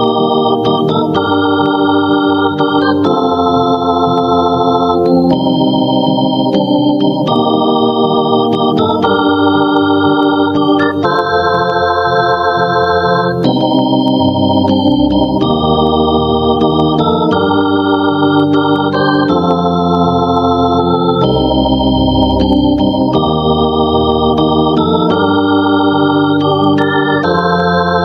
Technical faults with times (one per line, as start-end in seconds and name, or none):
0.00-28.04 gain pumping